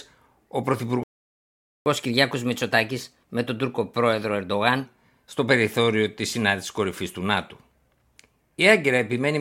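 At 1.03 s the speech cuts to silence and stays silent until 1.86 s, a gap of about 0.83 s. This is a playback stall, likely from the player running short of data. Unlike a dropout, nothing is skipped: the speech resumes exactly where it stopped.

From 1.86 s to 4.86 s, around "στο περιθώριο της συνάντησης", the speech runs 1.1 times fast and sits roughly a semitone and a half higher. This is catch-up at higher speed, as the player works through its backlog. Unlike a steady pitch shift, both tempo and pitch rise together and then settle back to normal.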